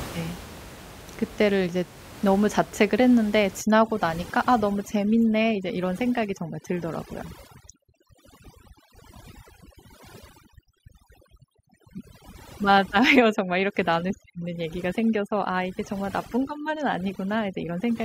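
Overdone noise removal runs from 3.61 s to the end of this speech recording: an overly aggressive reduction stage pushes frequency bands near its noise estimate far down, making the room noise (about 18 dB below speech) drop and break up into twinkling specks.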